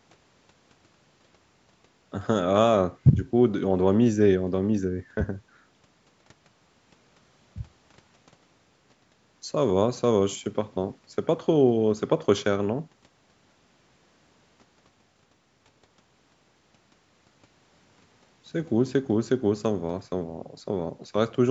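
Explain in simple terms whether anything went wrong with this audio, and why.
Nothing went wrong here; the speech simply came through a call's microphone processing, which trims away the deepest bass and leaves nothing above 8 kHz, and that's just how call audio normally sounds.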